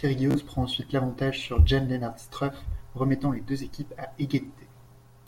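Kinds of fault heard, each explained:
Bluetooth stutter: from 0.31 to 0.41 s, late or lost packets make the receiver repeat its last slice of speech, a machine-gun buzz. Unlike a silent dropout, the gap is filled with repeats, and speech resumes about 46 ms further on, fitting three lost packets.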